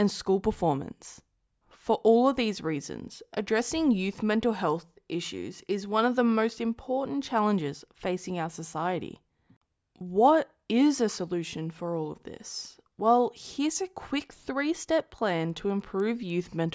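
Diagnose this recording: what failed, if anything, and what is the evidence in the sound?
The fault sits in the sample-rate conversion stage, where a resampler restarted on every block. From 15.0 s, just after "here's a quick three", to the end at 16.75 s, regular ticks at 10 Hz ride on the speech. That fits 100 ms blocks converted from 44.1 kHz to 16 kHz separately, each edge missing its true neighbours. Unlike buffer underruns, nothing drops out, and the ticks are strictly periodic and present only with signal.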